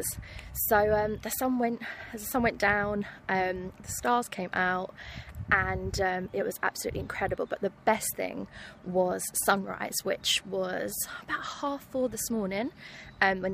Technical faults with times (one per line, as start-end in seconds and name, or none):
0.52-12.69 word clock ticks